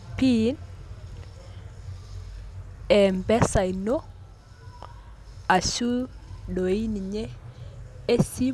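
A speech recording with a steady tick at 20 per second running under it from start to end. The fault is a resampler restarted on every block. Converting 48 kHz to 24 kHz in separate 50 ms blocks leaves a small error at each block edge. The ticks follow the signal and fall silent in pauses.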